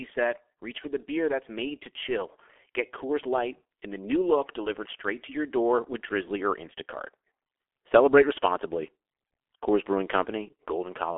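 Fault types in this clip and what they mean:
G.723.1 codec: an old low-rate telephony coder, and the heavy damage sounds like its roughly 6 kbit/s mode. Nothing comes through above about 3.6 kHz, so the speech is muffled and hoarse, with smeared consonants from its slow 30 ms frame-by-frame voice modelling.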